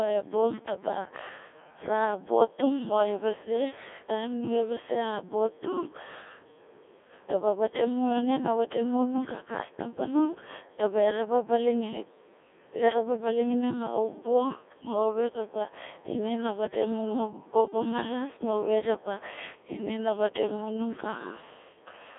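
From start to finish the speech passes through a Codec 2 vocoder. Nothing of the original waveform survives. Only pitch, voicing, energy and a coarse spectral shape remain, rebuilt from sine waves. The voice sounds robotic and buzzy, confined to 300 Hz to 3.5 kHz. The heavy damage points to a very low rate, around 1.6 kbit/s.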